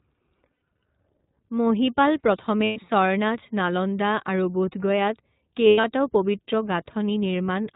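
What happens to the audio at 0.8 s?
At 0.8 s the sound is near the end of lost iLBC frames, spanning 0.58 to 0.82 s. About 160 ms went missing in gaps spread over about 280 ms, the longest around 70 ms. The decoder repeats the last pitch cycle mixed with noise, so the gaps sound like a held, buzzy vowel. The sound recovers almost immediately afterward. Underneath, the iLBC codec cuts everything above 4 kHz and leaves a slightly rough, synthetic texture.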